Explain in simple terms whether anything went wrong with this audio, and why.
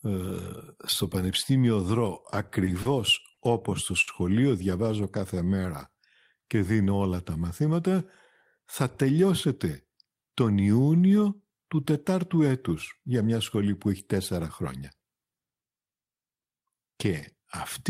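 Repeated stalls (stutter) from 2.31 to 2.88 s, just before "όπως στο": packets arrived late four times, so the player stretched the last sound, each pause up to 30 ms.

Short stall from a late packet at 3.33 to 3.40 s and again at 4.01 to 4.10 s, right after "όπως στο": one sound is held 40 ms, then 60 ms, while waiting for a missing packet.

Jitter buffer slow-down from 4.97 to 6.74 s, leading into "όλα τα μαθήματα": the player repeated tiny slices to rebuild its reserve, adding 117 ms and playing at 94% speed with the same pitch.

Jitter buffer speed-up from 8.84 to 10.51 s: too much audio had piled up, so tiny slices were cut, roughly a sixth of a second in total, and the sound runs at 108% speed and a little hurried.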